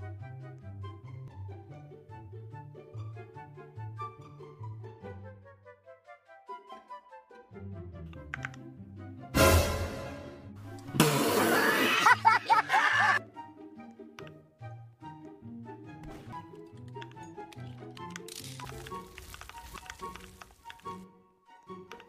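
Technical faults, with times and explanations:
1.28 s, 16.33 s, 18.65 s and 19.76 s, compressed frames skipped: the audio jumps ahead by roughly 0.2, 0.4, 0.7 and 0.5 s, consistent with whole frames of about 93 ms being dropped.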